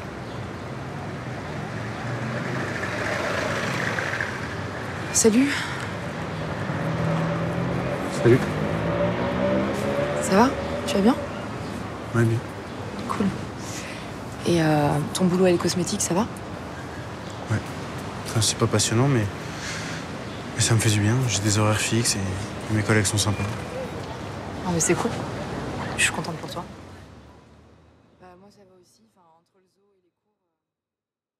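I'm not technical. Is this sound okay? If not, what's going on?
Yes, there's nothing technically wrong with this sound, and the gentle fade-out from around 26 seconds to the end is a normal finishing touch, not a problem.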